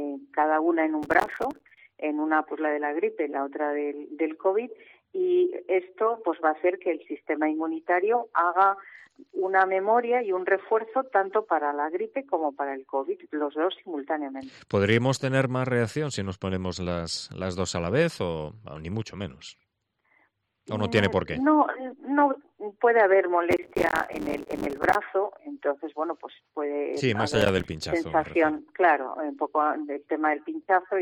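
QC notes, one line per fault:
1.03–1.78 s, 23.51–24.95 s and 27.32–27.73 s, processor overload crackle: three bursts of gritty, tearing crackle ride on the sound, the longest at 23.51 s. The processor misses its deadline on short buffers of a few milliseconds each, roughly 40, 100 and 15 times. Each missed buffer becomes a hard-edged gap of silence. The rapid chain of dropouts is heard as crackle, which stops once the load eases.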